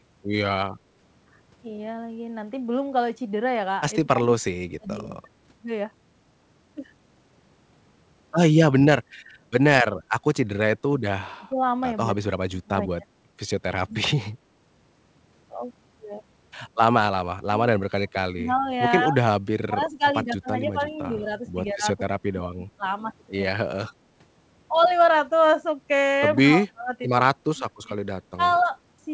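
From 4.02 to 5.29 s, then 11.21 to 13.08, 13.82 to 14.33 and 17.42 to 22.84 s, the voice keeps dipping by up to about 30 dB. That's speech suppressed in double talk, likely the echo canceller ducking everything while the far side talks.

Inside that long stretch, from 20.92 to 21.23 s, there's a faint echo leak: a copy of the voice about 155 ms late, roughly 25 dB down, likely where the canceller didn't fully remove the loudspeaker pickup.

The same suppression returns at 23.51 to 23.93 s and 26.38 to 28.71 s.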